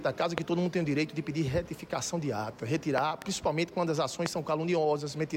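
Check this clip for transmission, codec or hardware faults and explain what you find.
Three loud pop events occur, at 0.38–0.40 s, 2.98–3.24 s and 4.26–4.28 s. The middle event is a pair of pops in quick succession. Each is a sharp transient standing roughly 20 dB above the surrounding sound, which continues uninterrupted beneath it. The likely cause is a sudden voltage step or pulse entering the chain, such as a switching transient, static discharge or driver glitch, which downstream stages shape into a brief thump.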